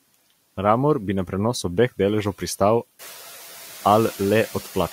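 Speech, with noise suppressor artifacts running right through it. The suppressor only pulls the steady background down by about 5 dB, so you hear the noise bed dip between phrases and swell back up under the speech. It gets easier to hear once the room noise itself climbs by about 14 dB around the 3 second mark, ending up roughly 18 dB below the speech.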